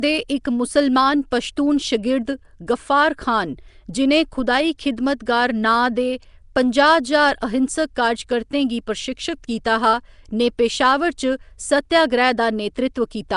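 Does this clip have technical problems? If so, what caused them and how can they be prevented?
Yes. Throughout the speech there is a rough, hissy halo and a smeared, underwater quality. The likely cause is Nellymoser compression, with its fixed bit budget per block, at a rate that sounds near 44 kbps. A spectrogram shows nothing above 10.6 kHz and grainy noise filling weak bands. To prevent it, record and deliver with a modern codec such as Opus at an adequate bitrate.

At 1.31 s there is pre-echo: the codec spreads its block's quantisation noise before a sharp attack, so about 11 ms of short hiss comes before the onset and softens it. On a waveform, low-level fuzz appears just ahead of the transient, and a spectrogram shows a broadband smear there. A codec with short-block switching prevents this.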